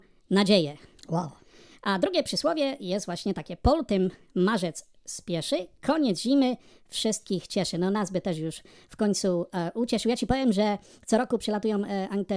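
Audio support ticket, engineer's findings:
Wrong sample rate, whole clip. Speech plays about 1.38x fast and roughly 5.5 semitones high, hurried and squeaky. Samples clocked out faster than captured, no resampling; pitch and tempo shift together. Ratio fits 16 kHz audio played at 22 kHz. Check playback-rate config.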